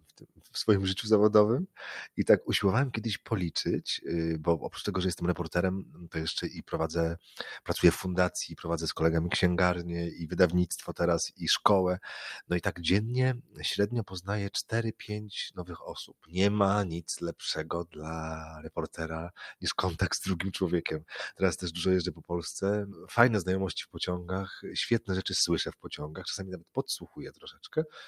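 From the start there's a noise suppressor applied to sounds it wasn't built for. A speech-tuned suppressor is treating sustained or ambient parts as noise and pulling them down, so the level keeps swinging by around 10 dB and the sound pumps and thins as it works.

On top of that, the suppressor cuts particular stretches much harder, at 0.0 to 0.52 s, 5.83 to 7.69 s, 10.9 to 11.42 s, 12.44 to 13.6 s, 14.64 to 16.35 s, 17.85 to 19.63 s, 21.01 to 23.96 s, and from 25.0 s to the end. Drops reach about 16 to 21 dB, so those bits sink or get their decay chopped.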